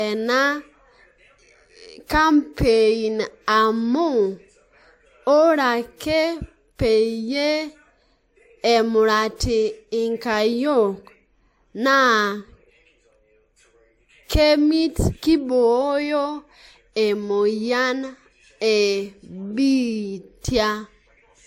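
Throughout the speech, transcoding between lossy codecs is audible, likely a low-bitrate MP3 re-encoded as WMA. Artefacts from both layers sit together. A spectrogram shows nothing above 16.6 kHz, a hard ceiling kept from the lowest cut-off in the chain.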